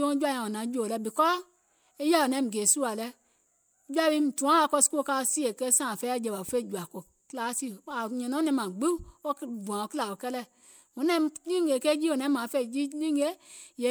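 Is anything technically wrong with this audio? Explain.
No, nothing technically wrong is audible in this speech recording.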